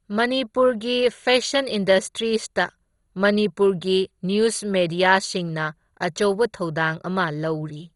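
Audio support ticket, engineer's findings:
Speech dull throughout, nothing above 11.2 kHz. Gurgling, granular distortion, upper bands flickering on and off. Likely MP2 compression, heavily bit-starved, consistent with roughly 56 kbps. Too few bits: top sub-bands dropped, remaining bands coarsely quantised.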